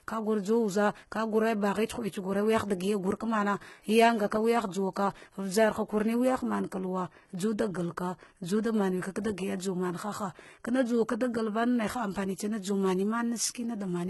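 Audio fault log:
throughout: HE-AAC compression, likely: copied-up treble makes s sounds gritty and metallic; spectrogram shows blocky, repeated upper bands, empty above 11.8 kHz, fitting a bitrate around 16 kbps.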